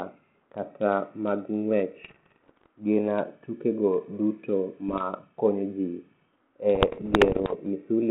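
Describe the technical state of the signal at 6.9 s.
Pops and rough, crackly bursts with brief jumps in level run from 6.75 to 7.54 s, the signature of bit errors on an ADPCM link at roughly one bit in a hundred. Each flipped bit knocks the decoder's step size and predictor off track, so the damage rings on for milliseconds. The underlying narrowband G.726 coding, consistent with 32 kbit/s, is working normally.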